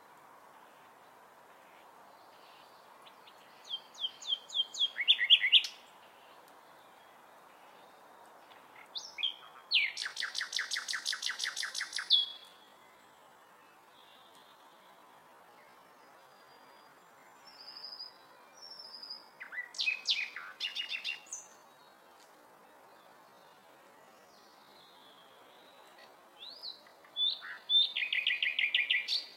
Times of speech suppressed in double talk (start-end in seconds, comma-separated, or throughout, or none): none